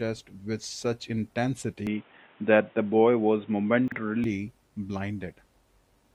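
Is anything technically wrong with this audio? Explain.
Yes, two faults stand out in this speech.

From 1.87 s to 4.24 s the sound abruptly turns dull and boxy, with nothing above 3.8 kHz, a level shift of roughly 5 dB, and a new background hiss sitting around 35 dB under the speech. It changes over with no gap and clears again at 4.24 s. This is likely an input switched to a poorer device, such as a narrowband headset microphone, which brings its own band limit, tone, gain and noise.

Between 3.88 s and 3.96 s there is a brief garbled, jumbled moment. This comes from chunks out of order: a 40 ms block of audio arrived or was written one chunk late, so it plays after the block that should follow it. No audio is lost, but the swapped order creates three hard joins.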